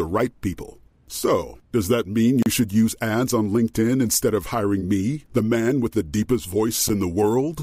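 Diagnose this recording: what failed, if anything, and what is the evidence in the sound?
Blocks of digital silence, at the buffer stage. Speech drops out at 2.43–2.46 s and 6.89 s. Output buffers likely went unfilled.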